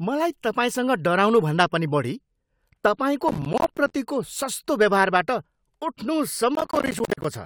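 The processor falls behind twice, from 3.28 to 3.92 s and again from 6.55 to 7.25 s, missing buffer deadlines over and over while the speech plays. Each missed buffer drops out as a short hole of silence with hard edges. The holes are spaced in a way that points to buffers of around 10 ms, a few dozen per episode. Together they become processor overload crackle, a gritty tearing over the speech that stops once the load eases.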